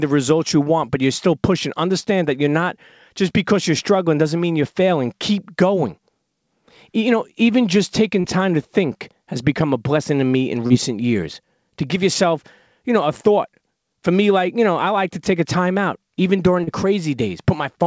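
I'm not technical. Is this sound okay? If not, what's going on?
No. There are four moments of short concealed packet loss, at 2.00, 8.20, 10.67 and 16.64 seconds. Each time, about 30 milliseconds of the call arrived too late, so the receiver briefly stretched the preceding sound to cover the gap. You may hear a quick smear or wobble, or a consonant may go missing.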